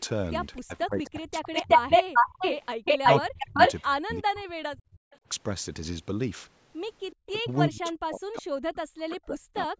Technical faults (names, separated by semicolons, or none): echo leak; speech suppressed in double talk